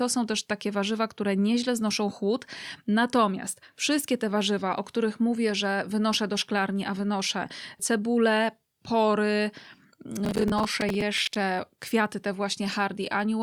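At 10.25 s the speech picks up a gritty crackle that lasts until 11.36 s. This is processor overload crackle. The processor kept missing its deadlines for buffers of about 10 ms, roughly twenty times. Each miss replayed a scrap of old audio with hard edges.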